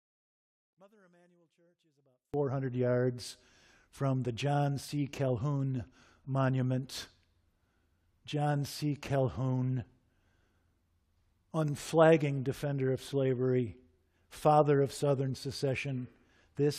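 From 0.0 to 2.34 s, before "yards from the", level drops about 38 dB, near-flat waveform, likely one channel inverted cancelling centred speech in mono.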